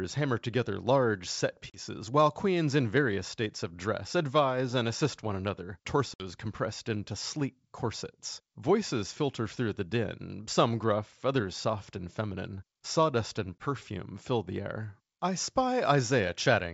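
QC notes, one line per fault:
1.70 s, 6.14 s, 13.59 s: packet loss on an ADPCM call, hard silent gaps of 40, 60 and 20 ms (after "hammer together large set", after "and assist one another", before "fill the"). The decoder's predictor and step size lose sync, so the wideband G.722 speech resumes slightly distorted before settling.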